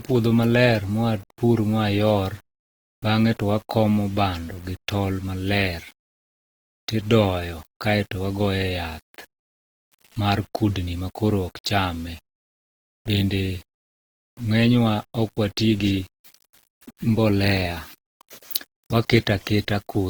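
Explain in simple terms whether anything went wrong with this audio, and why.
Yes, two problems run through the speech from start to finish.

The first is low bit depth without dither. The speech carries a constant gritty, grainy roughness that rises and falls with the sound. This fits an 8-bit signal that was likely rounded to few levels with no dither to smooth the steps.

The second is low-bitrate audio saved at a high bitrate. The speech carries the flaws of heavy compression, even though the file is a high-quality MP3 that keeps sound up to about 20.2 kHz. The damage points to an earlier, very low-quality encoding. Re-saving it at higher quality kept every flaw and repaired none.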